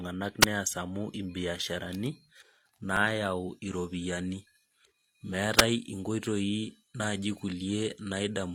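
At 0.41 s the speech drops out for about 50 ms in a wireless microphone squelch dropout. The analogue FM radio link fades, hiss rises briefly, and the receiver's squelch mutes the output to near silence before the speech returns.

Around 2.97 to 3.00 s there is an overlap between stream segments. Two segments' time stamps collide, and the player trims about 30 ms of real audio, so the waveform jumps with a small click or skip. There is no hiss and no silent gap. The timing fits six-second segments.

At 5.57 to 5.63 s the same squelch dropout recurs. Again it is a roughly 50 ms hole of near silence after a brief swell of static, unlike the segment overlap's abrupt splice.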